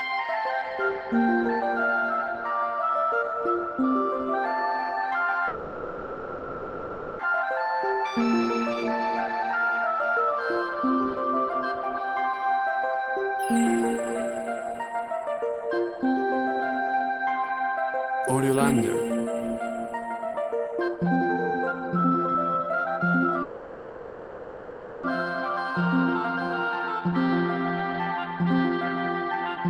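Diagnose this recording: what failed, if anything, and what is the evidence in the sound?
Call audio freeze at 5.47–7.21 s and 23.42–25.05 s: the last sound stretches into a fading buzz for 1.72 s and 1.61 s, then resumes exactly where it stopped. The likely cause is network delay draining the jitter buffer, inserting gaps without losing audio.

Jitter buffer speed-up at 13.96–16.82 s (108%, about 0.2 s trimmed), 20.14–23.28 s (135%, about a second trimmed) and 25.81–29.69 s (106%, about 0.3 s). The buffer cuts pitch-period slices to shed backlog, so audio hurries at unchanged pitch.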